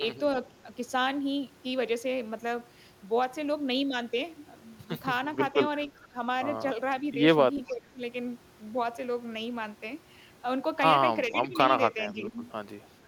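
The speech dips four times in a pattern that points to speech suppressed in double talk: at 5.92–6.17 s by about 15 dB, at 7.67–8.01 s by about 25 dB (the deepest), then at 11.35–11.58 s and 12.13–12.34 s by about 10 dB each. An echo canceller likely mistook overlapping far-end sound for echo and attenuated the talker too. On a waveform, the envelope pinches in; a spectrogram shows brief fades.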